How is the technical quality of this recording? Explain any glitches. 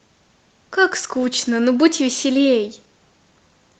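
The speech comes through a call codec that tops out around 8 kHz, which fits Opus at roughly 32 kbps, and two timing problems ride on top of it.

First, there's clock drift between sender and receiver for the whole clip, with the sender's clock running fast by about five percent. Audio arrives quicker than the receiver plays it out, so its jitter buffer keeps creeping fuller. Left alone that would mean growing delay, so the receiver has to shed material to keep up. You don't hear the drift directly. You hear what the receiver does about it.

That shows up as repeated timing corrections from about 0.03 s to 3.79 s. Because the sender is fast, the receiver keeps snipping out short bits of audio, always cutting and never repeating, at uneven spacing. The net effect is playback running at about 104% speed. Each cut is tiny, so rather than obvious dropouts you get faint hiccups and a slightly rushed, uneven pace across the speech.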